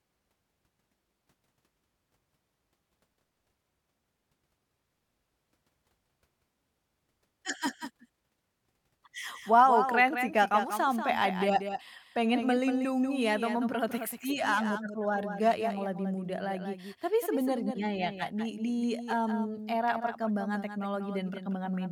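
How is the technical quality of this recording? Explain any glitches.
The speech carries a doubled audio track throughout: a second, quieter copy, about 10 dB down, trails the original by around a fifth of a second, with no decay or room colour, as if it were an echo. This is likely the same signal captured again through a slower path and mixed back in.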